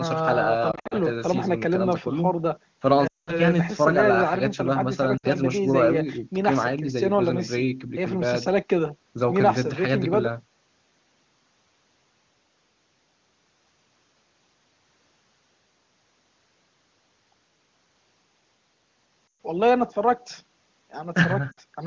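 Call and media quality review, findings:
Lost AMR speech frames at 0.71–0.94 s (scattered little warbles), 3.07–3.41 s (worst: drops to near silence within two frames), 5.17–5.27, 19.28–19.39 and 21.51–21.60 s. Radio errors. The wideband decoder repeats the last good frame with decaying gain, so the sound returns weak for a moment.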